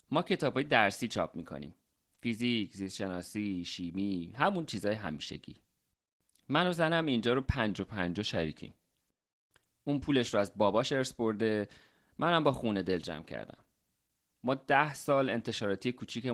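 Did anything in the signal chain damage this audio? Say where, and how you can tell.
Yes. Opus voice compression runs throughout the codec stage, plainly audible as muffled, hoarse, slightly robotic speech. That points to Opus in hybrid mode at around 16 kbps in 20 ms frames, where the linear-prediction layer codes the excitation coarsely and a thin layer handles content above 8 kHz.

A drift correction step runs from 7.70 to 8.67 s. The speech slows by about 5.6% and drops nearly a semitone (about 100 cents), then snaps back to normal. This is likely clock-matching software at the buffer stage abruptly resetting the playback rate to refill its buffer.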